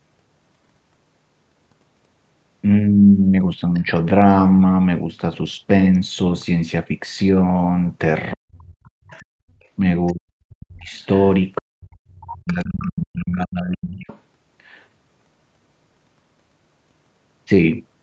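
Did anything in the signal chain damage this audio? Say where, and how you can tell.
Yes. The call processing stage let the other side's voice leak through. A faint second voice sits under the speech at 3.74–3.81 s, 9.09–10.13 s, 10.96–11.27 s, 12.47–13.18 s and 13.99–14.2 s. It runs about 20 to 30 dB below the talker. The likely cause is a loudspeaker playing the far end into the microphone. The echo canceller then left part of it behind.

Speech suppressed in double talk happens at the same stage. The talker's level collapses at 8.34–9.42 s, 10.12–10.93 s and 11.61–13.98 s. The deepest dips reach about 40 dB. These stretches overlap or touch the leaking far-end voice. That points to both sides talking at once. The echo canceller likely could not separate its own talker from the echo. So it turned everything down together.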